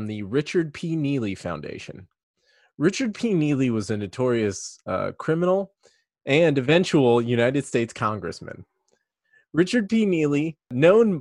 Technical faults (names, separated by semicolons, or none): none